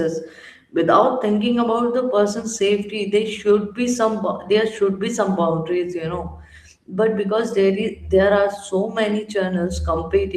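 No technical faults can be heard anywhere in this speech recording; the signal stays continuous and intact throughout.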